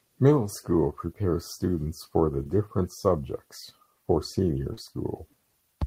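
At 2.43 to 2.47 s and again at 4.73 to 4.79 s, short concealed packet loss: about 20 ms, then 40 ms, of audio arrived too late, and the receiver extrapolated the preceding sound before blending back. Unlike a plain dropout, there is no silent gap, just a brief smear.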